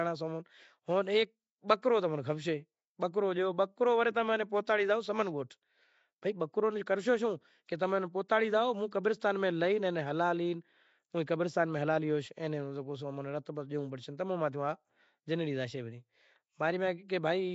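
A speech recording with a rough, hissy halo around everything and a smeared, underwater feel all the way through, with nothing above about 7.7 kHz. That points to Nellymoser compression, likely the old Flash microphone codec at something like 32 kbps, filling starved bands with noise.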